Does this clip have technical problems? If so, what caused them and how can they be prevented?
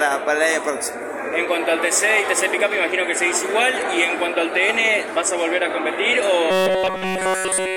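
Yes. From 6.51 to 7.77 s the sound becomes a rigid metallic buzz fixed at 188 Hz. This is robotic sound from repeated short buffers, likely a 5.3 ms slice replayed while the real audio is skipped. It repeats too fast to hear as separate stutters. Larger buffers or steadier audio delivery would prevent it.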